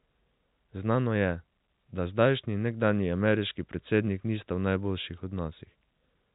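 At 5.17 s there are bit errors on a digital phone line. A few flipped bits in the G.711 A-law stream, at a very low rate of roughly one in a thousand, each corrupted one sample. Unlike packet loss, nothing drops out, and the speech around the errors is untouched.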